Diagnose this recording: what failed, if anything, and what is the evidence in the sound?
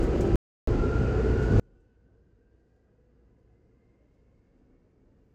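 At 0.36 s the sound cuts to dead silence, with no room tone, and picks up again at 0.67 s, so roughly 320 ms is simply gone. That audio dropout to silence likely came from the input or link dropping while the recorder kept writing silence.

From 1.6 s to the end, the mono sum falls by about 39 dB, leaving only a faint residue of whatever differs between the sides. That's one channel inverted, most likely a polarity swap in the analogue wiring of one leg.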